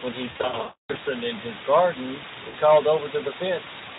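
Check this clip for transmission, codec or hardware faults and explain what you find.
Two faults are audible in this speech clip, with the Speex link carrying it underneath.

Low bit depth with dither runs throughout: a 4-bit signal with dither leaves an even hiss nearly as loud as the speech, which shows as a uniform grey noise floor across the spectrogram.

VoIP packet loss concealed by the speech codec hits from 0.31 to 0.97 s, where about 500 ms of audio is lost in gaps scattered over 640 ms, the longest run 280 ms. It hits again from 2.47 to 2.55 s, a 60 ms gap. The decoder stretches the last pitch and filter into a buzzy tone or coloured noise that fades, seen as smeared, decaying energy.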